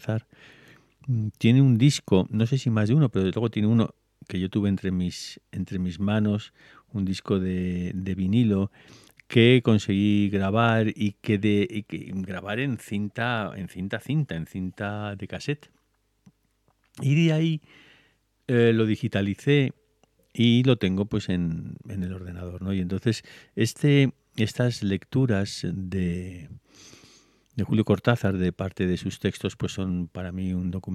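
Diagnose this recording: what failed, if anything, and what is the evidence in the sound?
Nothing failed; no faults heard.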